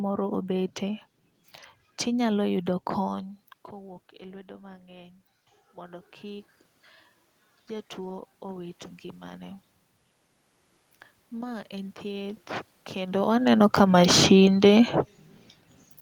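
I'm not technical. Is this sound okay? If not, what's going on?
No. Around 3 s the talker moves back and the voice drops. Then you hear automatic gain rising. The system slowly turns itself up, from 3.07 to 6.53 s, 7.67 to 9.67 s, and 11.3 to 13.46 s. Voice and room noise swell together each time.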